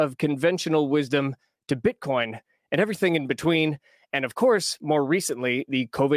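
No technical faults are audible.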